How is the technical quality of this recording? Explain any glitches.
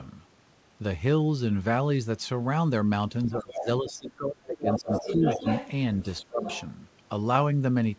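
The recording has clear echo-control problems between about 3.3 and 6.7 seconds. It sounds like a call where both sides spoke at once. The band stops at 8 kHz, which fits a G.722 call path at 64 kbps.

Speech suppressed in double talk shows up twice. From 3.26 to 5.45 s, the speech is turned down for roughly two seconds in total, falling by about 20 dB at its deepest. From 6.19 to 6.43 s, it drops again, briefly, by about 25 dB. The likely cause is the echo canceller. It could not tell the talker from the loudspeaker echo, so it turned everything down.

The other side's voice leaking through appears four times. At 3.41 to 3.66 s and 4.54 to 5.71 s, a second voice sits only about 5 dB below the speech. At 6.01 to 6.22 s, it is very faint, about 35 dB down. At 6.41 to 6.71 s, it returns at about 10 dB below. The likely cause is incomplete echo cancellation. The far side's voice, played on the talker's loudspeaker, reached the microphone and was not fully removed.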